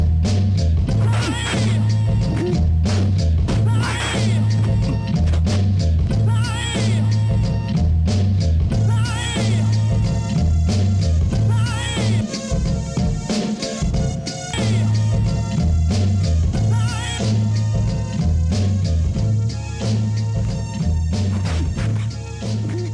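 Nothing goes wrong anywhere in this audio; there's no technical fault to point to at any moment.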